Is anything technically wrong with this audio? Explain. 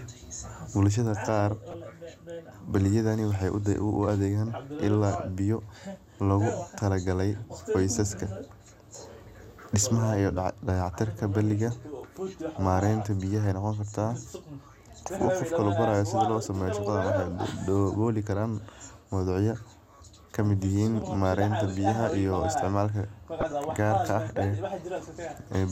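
Yes. DAB burbling occurs at 1.70–1.75 s, 14.65–14.73 s and 23.41–23.52 s in this speech. Roughly 0.15 to 0.2 percent of bits slip past error correction and corrupt MP2 samples and scale factors, so single sub-bands get short noise blips or lurch in level, producing burbling blips.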